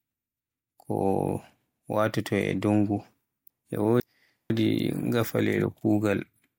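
Chunks out of order from 3.50 to 4.50 s in this speech clip: one 500 ms block plays a chunk late, swapping two halves, so the speech jumbles.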